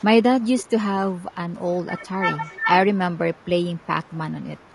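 Throughout, the speech has a rough, grainy texture, with noise filling the gaps between the voice's harmonics and a top band that sounds thinned and somewhat synthetic. This is low-delay AAC compression, likely AAC-ELD at a rate that sounds close to 32 kbps. Its short frames cannot resolve pitch harmonics finely, so the damage is constant and tied to the voice. Background hiss would instead stay steady in the pauses.

From 0.43 to 0.68 s the voice itself dips in short pieces, falling by roughly 15 dB at its deepest. This is speech suppressed in double talk. The echo canceller was likely confused by both sides talking at once and turned the near talker down along with the echo. Smaller dips of about 5 dB follow at 1.31–1.36, 2.61–2.65 and 4.06–4.10 s. Nothing is added to the sound; the wanted speech simply sags.

Echo leak works the other way, adding a faint copy of the speech. It comes about 395 ms late and sits roughly 30 dB below the speech at 1.56–1.65 and 2.02–2.06 s. 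It rises to about 25 dB below at 2.33–2.56 s. A loudspeaker's sound likely got past an echo canceller and was sent back. Its fixed delay sets it apart from reverberation, which trails off smoothly.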